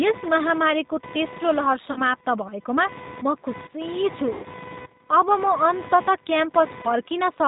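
Throughout the speech, computer activity noise sits roughly 20 dB below the voice as a buzzy chirping that pulses at around 500 Hz. It rises and falls with the machine's load rather than with the speech, which separates it from hum or codec noise. This is ground disturbance from processor or peripheral activity leaking into the audio circuit.

Also throughout is plainly audible G.729 codec damage. Nothing above 4 kHz comes through, and the voice sounds slightly rough and synthetic because it is rebuilt from a filter, a pitch predictor and a few pulses per frame. This suits an 8 kbit/s stream, and the fixed band limit and steady texture tell it apart from the intermittent noise.

From 1.92 to 2.02 s, VoIP packet loss concealed by the speech codec replaces about 40 ms of lost audio, consistent with two packets. The decoder stretches the last pitch and filter into a fading sound instead of leaving a silent gap. 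Weak, distorted speech lingers briefly after the concealed sound. Unlike a clean dropout, nothing actually cuts to zero.

From 4.33 to 4.47 s, a longer concealment covers about 100 ms, which fits five packets. The same extrapolated sound fades further.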